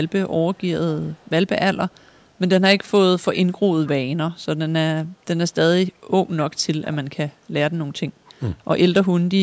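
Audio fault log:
0.05–0.12 s, 0.40–0.68 s, 1.04–1.30 s, 1.89–2.32 s, 3.86–3.90 s and 8.26–8.33 s, echo leak: the echo canceller on the loudspeaker side likely failed to remove all of what its microphone picked up, so a faint copy of the speech returns 234 ms late in short scraps. Most sit roughly 35 to 40 dB below the speech. The brief one at 3.86 s is louder, about 25 dB down.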